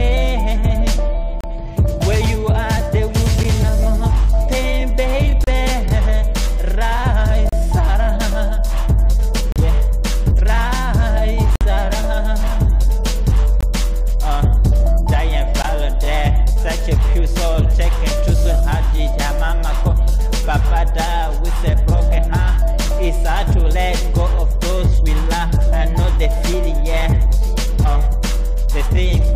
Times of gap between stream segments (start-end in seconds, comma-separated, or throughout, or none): 1.41-1.44, 3.43, 5.44-5.47, 7.49-7.53, 9.52-9.56, 11.56-11.61, 13.61-13.63, 15.62